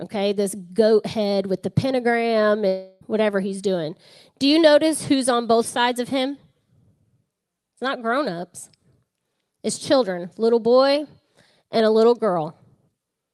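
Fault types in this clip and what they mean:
Long network dropout: at 2.67 to 3.03 s the speech gives way to a fading buzz, likely lost packets. Unlike a brief glitch, about 0.34 s never returns.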